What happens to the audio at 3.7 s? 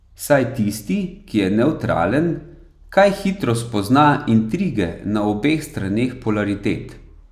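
Nothing goes wrong at 3.7 s; the speech there is intact, with no dropout, click, distortion or other fault.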